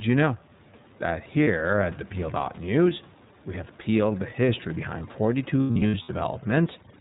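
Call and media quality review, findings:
iLBC codec, whole call: band-limited at 4 kHz, plainly rough, slightly synthetic speech texture. Consistent with iLBC in its 30 ms frame mode, which fits 13.33 kbps. Each frame's excitation is coded independently, so the graininess is steady rather than building up.

Lost iLBC frames, 1.44–1.48 s, just before "at the": brief held, buzzy vowel about 30 ms long, which fits a single dropped 30 ms frame. The decoder repeats the last pitch cycle with noise and recovers clean on the next frame.

Lost iLBC frames, 5.61–6.10 s: repeated buzzy, breathy sustains scattered across about 480 ms, totalling 270 ms, which points to nine lost 30 ms frames. The longest run is around a tenth of a second. Fast recovery after each loss matches iLBC's independent frames.

Overdone noise removal, 5.01 s to end, after "have peeled the history": room noise, about 23 dB below speech, drops to near silence with twinkling specks. 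An aggressive suppressor is zeroing bands near its noise estimate and taking low-level speech components with them.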